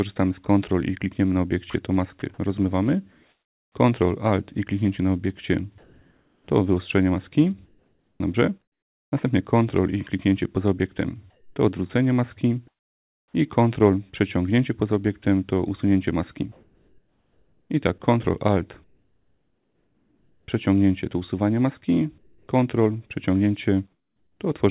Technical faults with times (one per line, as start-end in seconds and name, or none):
1.70-2.22 sound chopped by the voice detector
5.78-9.12 comfort noise in place of the background
11.30-13.34 comfort noise in place of the background
16.52-20.48 comfort noise in place of the background
22.18-22.48 comfort noise in place of the background
23.92-24.40 comfort noise in place of the background